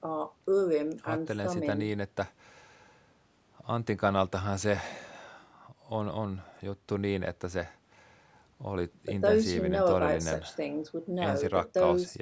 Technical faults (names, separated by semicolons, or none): none